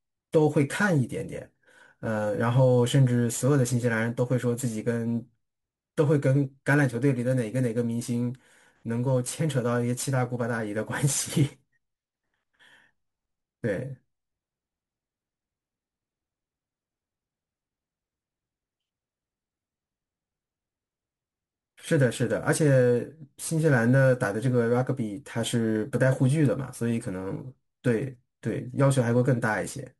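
From start to finish, a gritty, inharmonic fizz rides on the speech, strongest on loud and bright sounds. This is crude rate conversion: samples were simply dropped to the nearest neighbour, fitting a 48 kHz to 44.1 kHz change, leaving aliasing tones roughly 30 dB below the speech.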